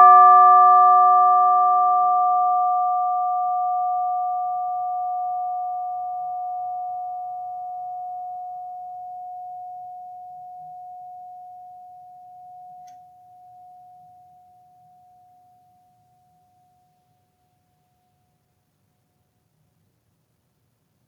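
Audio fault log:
Nothing stood out on listening to this music.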